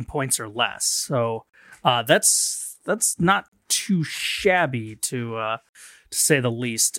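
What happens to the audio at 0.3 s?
Nothing goes wrong at 0.3 s; the speech carries on intact at that point, with no dropout, click or distortion.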